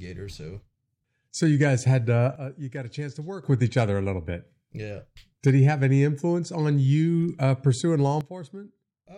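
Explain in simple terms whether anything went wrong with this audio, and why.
Something did go wrong here. The speech suddenly drops much quieter twice, with no fade. The first drop runs from 2.36 to 3.44 seconds, starting right after "you guys had uh" and ending before "with each other a". The second starts at 8.21 seconds, after "you uh pursuing law", and lasts to the end. This is a sudden gain jump. The voice and the background noise fall together. The cause is likely a volume setting switched instantly, without a smooth ramp.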